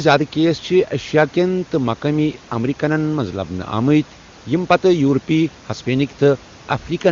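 Nothing here goes wrong: the room's background noise sits about 24 dB under the speech, and the wideband phone coding shows little or no strain at what sounds like its highest rate.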